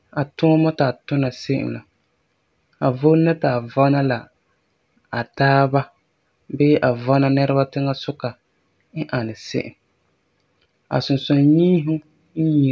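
No technical faults can be heard anywhere in the speech recording: the signal stays continuous and stable throughout, with its level, timing and tonal balance holding steady.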